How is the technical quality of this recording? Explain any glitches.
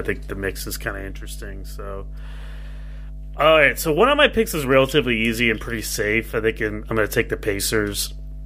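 The recording has one clear problem: a mains hum running under the speech from start to finish. It's a steady low drone sitting at 50 Hz, and it's fairly prominent, only around 15 dB below the speech itself, so you'll notice it in the pauses and even underneath the talking. The mechanism is power-line interference leaking into the signal path, typically from a ground loop between connected gear or a transformer sitting close to a cable or the mic. That puts the hum at the mains frequency, heard as a steady, buzzy tone.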